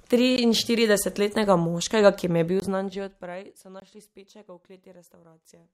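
At 0.36 s, 2.60 s and 3.80 s, blocks of digital silence cut the speech. The sound drops out for 16 to 20 ms. Each is heard as a short hole.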